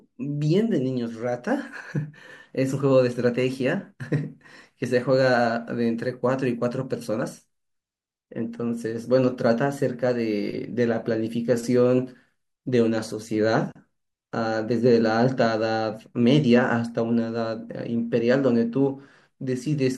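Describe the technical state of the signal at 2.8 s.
The audio is intact at 2.8 s, with no audible fault at that point.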